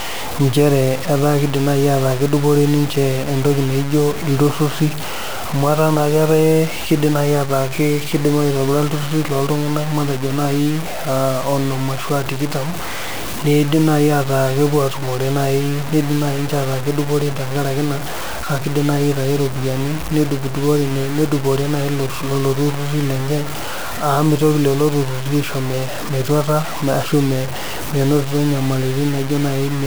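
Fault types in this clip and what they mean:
Low bit depth without dither: grainy distortion runs through the whole speech clip and follows the signal, so quiet passages turn gritty and sputter toward silence. The error sits roughly 15 dB below the speech, which fits likely truncation to about 4 bits without dither.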